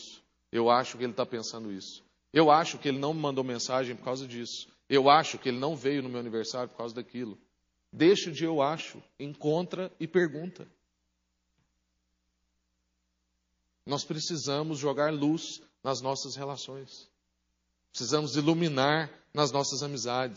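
Throughout, the speech has a plainly audible watery, swirling quality with a dulled top end, likely from MP3 compression at a low bitrate near 32 kbps, unlike steady broadband hiss. At 17.91 to 17.94 s, pre-echo: a hiss about 10 dB up spreads 34 ms *before* an attack, because long 72 ms blocks were never switched short. Unlike reverb, it leads the sound rather than trailing it.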